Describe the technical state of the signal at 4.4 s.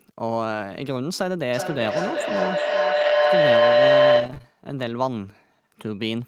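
At 4.4 s two faults overlap. A feedback howl runs from 1.54 to 4.59 s: a microphone-to-loudspeaker loop gains on each pass and narrows to a tone near 500 Hz, peaking about 9 dB above the speech and pulsing roughly every 400 ms. On a spectrogram it shows as a bright horizontal band near 500 Hz, and the waveform envelope swells periodically.

Inside that stretch, repeated packet loss (robotic sound) covers 4.15 to 4.46 s. Several short gaps, the longest 20 ms, are patched by extending the preceding sound, so about 27% of the span is concealed, giving choppy speech with pieces missing. The waveform shows repeated, copied-looking cycles, and the spectrogram shows smeared, striped harmonics.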